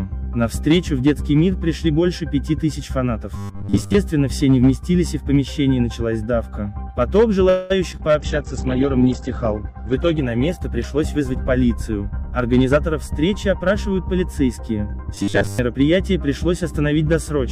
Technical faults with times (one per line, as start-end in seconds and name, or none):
3.36-3.94 robotic sound from repeated short buffers
7.49-7.72 call audio freeze
7.92-8.13 short concealed packet loss
8.19-12.95 call bitrate drop
12.21-15.84 jitter buffer speed-up
15.15-15.59 robotic sound from repeated short buffers